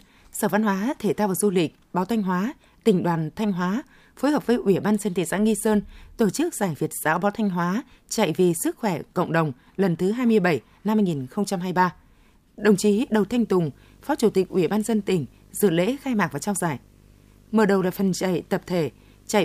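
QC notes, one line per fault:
12.59–19.45 s: video or display buzz, a 50 Hz field-rate buzz with hash and a 15.6 kHz line tone, picked up from a screen or video cable.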